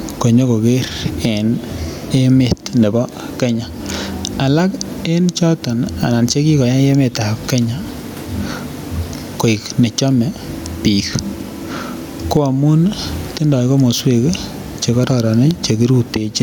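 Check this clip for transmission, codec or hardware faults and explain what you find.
One fault runs through the speech: gain pumping. It is audible from start to finish. Input gain is likely set far too high, so a fast limiter clamps down on each loud syllable and releases in the pauses. The level swings by around 15 dB, with the room noise about 39 dB below the speech, leaving the speech squashed and breathing.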